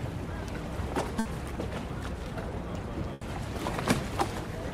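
At 1.19 to 1.27 s and 3.13 to 3.23 s, a burst of packet loss is concealed with decaying repeated sound, visible as smeared, fading spectral bands before the waveform resumes further on.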